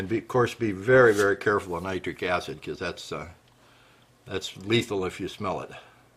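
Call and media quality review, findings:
No faults found in the signal path: no dropouts, clipping, glitches or level disturbances are audible anywhere in the clip.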